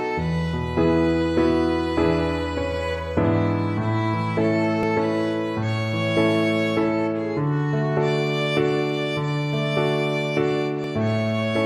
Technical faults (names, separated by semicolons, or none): overlap between stream segments